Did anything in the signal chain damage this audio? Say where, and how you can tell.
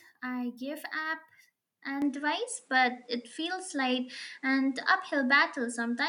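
Yes. At 2.02 s, with no gap, the speech loses everything above 10.3 kHz, shifts level by roughly 5 dB and gains a new noise floor about 40 dB down. The input likely switched to a poorer device; a codec change would narrow bandwidth without new noise.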